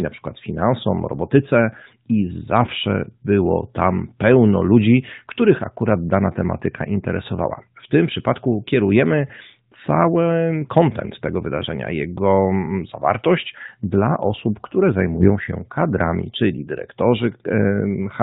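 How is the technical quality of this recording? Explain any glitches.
The recording is narrowband mobile speech, band-limited at 4 kHz, with one short burst of AMR bit errors.

From 15.16 to 15.29 s, about 130 ms, with four codec frames hit, the weakly protected bits arrived corrupted at a rate of a few percent while the frame checksum still passed. The decoder misplaced its excitation pulses and used wrong fine pitch, gain and spectral values, so the speech keeps roughly its level and pitch but turns scratchy and gargly. On a spectrogram, harmonics smear into ragged, noisy energy below 4 kHz, and the waveform keeps its envelope but loses regular periodicity.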